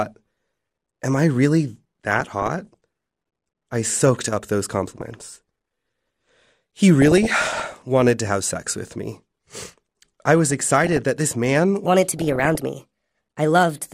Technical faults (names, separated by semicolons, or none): DAB burbling; section at the wrong speed